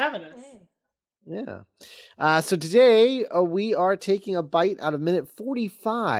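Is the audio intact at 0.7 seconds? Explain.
Yes, the speech at 0.7 seconds is intact, with no dropout, click, distortion or other fault at that moment.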